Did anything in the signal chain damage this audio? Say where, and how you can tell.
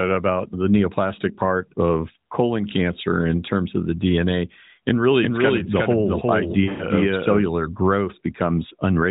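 Yes. From 5.22 to 7.42 s a doubled audio track is present: a second full-band copy of the speech trails the original by roughly 400 ms, about 5 dB quieter. On a spectrogram the harmonic patterns repeat, shifted right by that fixed gap, with no smearing or reverberant tail. In the waveform the copy starts and stops abruptly at those edges. The stage is the capture or editing path, likely a second, slower route recording the same signal and mixing it back in.

At the codec and network stage, lost AMR speech frames fall between 6.64 and 6.86 s. About 140 ms of speech goes missing, spread over 160 ms, which fits seven 20 ms frames, and the longest unbroken gap is 100 ms. The decoder fills the gaps by repeating the last good pitch and spectral envelope at falling gain, so the sound stretches and fades, then returns thin and rough. On a spectrogram, frozen horizontal harmonics below the 4 kHz narrowband ceiling fade out.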